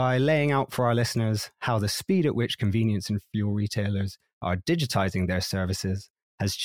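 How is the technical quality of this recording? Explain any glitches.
The recording has one recurring fault: small regular clicks run through most of the speech.

Clock slip clicks occur from 0.19 s to 6.56 s, about every 0.15 s, around 50 in all. Each is a single sample dropped or repeated. The likely cause is two devices running on independent clocks with no sync between them, differing by roughly 150 parts per million, so a whole-sample mismatch builds up at that steady rate. The result is an evenly spaced ticking under the speech.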